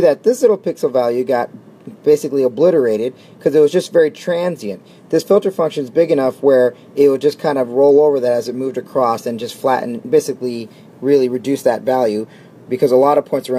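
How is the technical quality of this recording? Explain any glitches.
No technical glitches can be heard anywhere in this recording. The sound stays steady and continuous throughout, with nothing that breaks into it or disturbs it.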